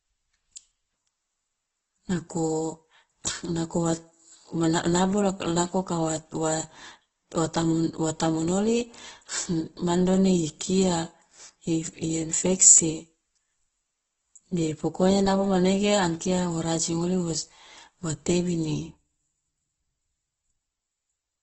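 The speech clip has likely been through heavy Opus compression at a low bitrate, consistent with roughly 12 kbps in the music-oriented mode, for its whole length. Nothing reaches above 8 kHz, and the starved encoder fills bands with folded or noisy content, so the speech sounds grainy, rough and dull.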